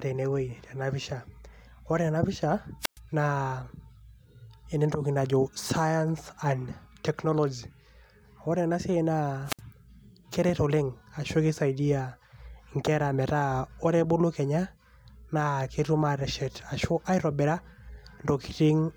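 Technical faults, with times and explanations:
2.80–2.99 s and 9.45–9.61 s, wireless microphone squelch dropout: the radio link fades, hiss surges, then squelch mutes for about 114 ms and 61 ms. On a spectrogram, broadband noise is followed by a blank gap, and the waveform shows a flatline hole.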